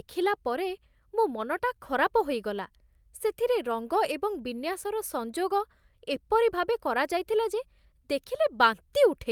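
Nothing in the speech stood out as a technical problem on listening.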